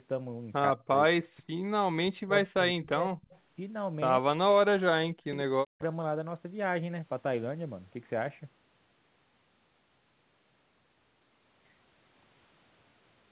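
From 0.72 to 1.22 s and 1.9 to 3.29 s, the speech repeatedly dips by up to about 40 dB, likely speech suppressed in double talk: the echo canceller mistook overlapping talk for echo. At 3.3 s comes an echo leak, a faint scrap about 30 dB down, arriving 151 ms late. It likely slipped past the far side's canceller. The same suppression returns at 4.21 to 4.45 s and 4.68 to 5.82 s.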